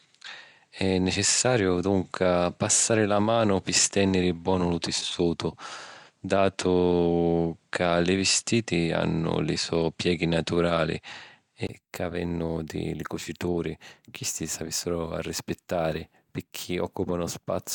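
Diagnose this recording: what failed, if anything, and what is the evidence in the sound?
The speech sounds duller and band-limited from the start until 11.69 s, with nothing above 9.9 kHz, then a 20 ms gap and clearer, fuller sound with a level change of around 5 dB. At the driver stage, this is likely an input switched to a poorer device, with its own faint noise floor around 50 dB down.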